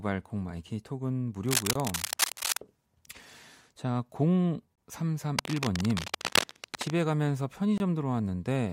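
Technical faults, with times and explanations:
1.46–2.59 s and 5.39–6.93 s, cable scratch noise: dense, uneven crackling rides over the speech, about as loud as it in the first stretch and somewhat quieter in the second. The likely cause is a worn cable or connector being handled. Unlike the gaps, nothing is taken away. Noise is added on top.
1.73 s, 4.75 s and 7.78 s, gap between chunks: each is a silent hole of 23 ms, recurring every 3.0 s. That steady spacing marks chunk joins rather than random dropouts, and the speech resumes with nothing missing.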